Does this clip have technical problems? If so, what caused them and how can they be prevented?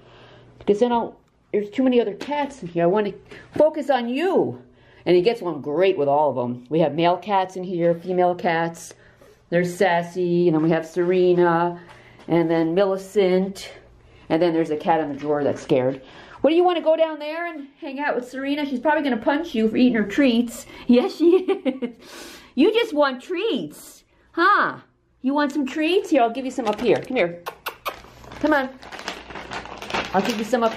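No technical problems are audible.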